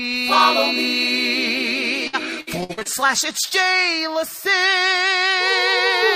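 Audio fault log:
2.07–3.53 s, repeated packet loss (robotic sound): ten short dropouts arrive in quick succession, the longest 58 ms, with about 320 ms missing in total. Most holes are patched by stretching the preceding sound, filling roughly 295 ms and about a fifth of the stretch, which gives the choppy, robotic texture. On a spectrogram, the gaps appear as smeared, repeated vertical bands with frozen harmonics; the waveform shows looped, self-similar cycles and abrupt joins.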